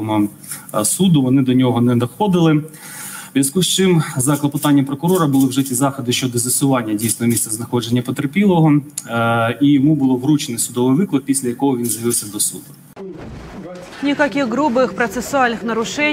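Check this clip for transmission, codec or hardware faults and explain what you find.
Nothing here points to a problem with the transmission path or the gear, so there's nothing to flag.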